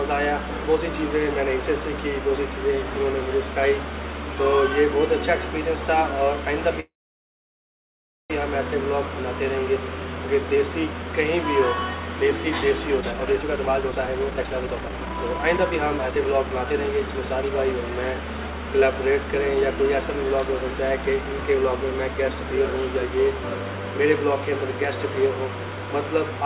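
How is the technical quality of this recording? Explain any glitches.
The recording has two timing glitches, a freeze and a speed-up, and the whole clip has no content above 4 kHz, which fits a narrowband call codec such as G.711 mu-law.

Call audio freeze, 6.8 to 8.32 s. The likely cause is packets held up in transit, so the jitter buffer ran dry. The receiver stretched the last sound briefly and then fell silent for about 1.39 s of the 1.5 s hold. When packets resumed, the audio picked up exactly where it stopped, so nothing is lost; a gap has simply been inserted.

Jitter buffer speed-up, 13.01 to 17.50 s. Having built up extra delay, the receiver trimmed it by cutting out many short pitch-period-sized pieces in succession, removing roughly one and a half seconds in total. Over this stretch the sound runs at 133% speed with its pitch unchanged, so it comes across as noticeably rushed.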